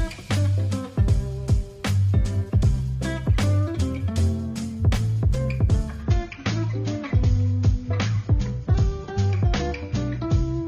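From 6.02 s to the end, the adaptive stream switches to a lower bitrate: the connection slows and the player jumps to a leaner encoding. The sound turns duller and swirlier at once, with nothing above 7.1 kHz and more smearing and warbling artefacts, which fits a step from about 96 to about 24 kbit/s AAC. Unlike a rebuffering stall, there is no gap or pause, and unlike a simple low-pass filter, the loss comes with coding artefacts.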